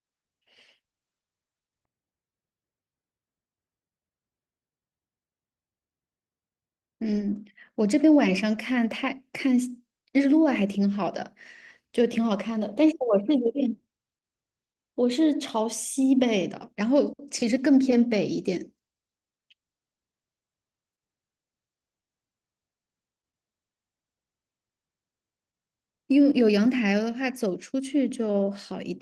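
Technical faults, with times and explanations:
No technical faults can be heard in this speech.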